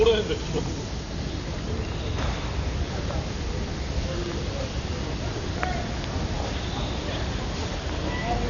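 Dull and band-limited throughout, with nothing above 6.9 kHz and rough, fluttering noise; this likely comes from heavy Dolby Digital compression, consistent with roughly 48 kbps.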